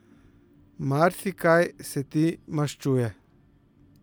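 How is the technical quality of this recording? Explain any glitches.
The speech signal holds steady throughout, with no glitches, gaps or disturbances anywhere in the recording.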